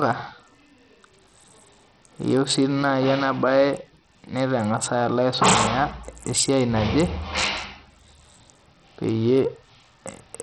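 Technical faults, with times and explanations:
Throughout, Bluetooth SBC compression: the speech sounds dull and gritty, with the treble thinning out and flickering in and out while a rough, grainy noise and aliasing cling to it. This is likely an SBC link at a very low bit pool, around 64 kbps, where the simple allocation starves the upper sub-bands of bits and coarsely quantises the remaining bands, so high frequencies vanish and quantisation noise rides on the speech.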